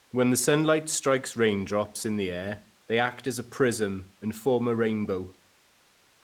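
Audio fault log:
There is no fault to log.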